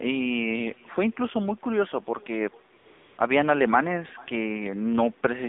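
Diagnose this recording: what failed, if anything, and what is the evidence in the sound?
Echo with no canceller, a call-processing failure: the speech returns about 0.4 s later at about 28 dB down, a thin, quieter copy rather than the close reflections of room reverb.

AMR narrowband mobile codec damage: the band runs from 200 Hz to 3.7 kHz, and the synthetic buzz fits a low AMR-NB rate such as 7.4 kbps, unlike the duller sound of simple low-pass filtering.

AMR comfort noise at 2.78–2.86 s and 2.88–3.18 s: smooth, steady synthetic noise replaces the real background, a codec behaviour, distinct from dropouts, which fall to silence.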